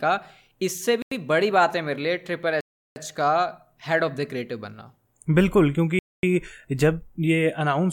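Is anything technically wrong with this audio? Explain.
Yes. The speech cuts to complete silence three times: from 1.02 to 1.12 s (92 ms), from 2.61 to 2.96 s (353 ms), and from 5.99 to 6.23 s (242 ms). These gaps are likely a Bluetooth stall. Radio interference delays packets on the wireless link, the receiving buffer empties, and playback halts until the retransmitted audio arrives. Each one sounds like an abrupt dropout, with the voice vanishing mid-flow and then resuming once data is flowing again.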